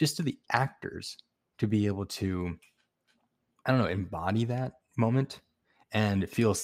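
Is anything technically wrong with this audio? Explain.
No, the speech signal shows no technical faults at any point in the recording.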